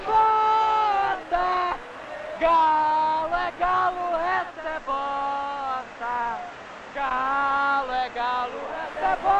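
At 4.36 s the receiver loses its digital stream and blends to analogue FM over 349 ms. Until 8.95 s the sound is about 3 dB quieter and carries faint hiss roughly 35 dB down.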